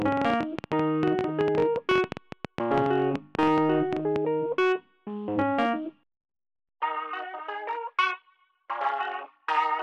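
A train of clicks runs from 0.02 to 4.17 s, about 10.4 irregular pops per second, peaking about 15 dB above the audio, likely from electrical interference.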